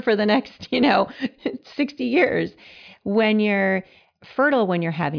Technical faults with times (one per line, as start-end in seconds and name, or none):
none